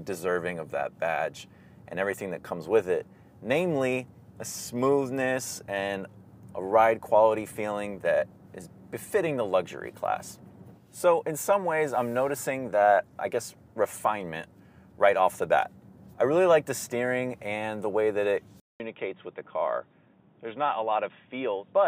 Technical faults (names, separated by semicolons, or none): input switched to a poorer device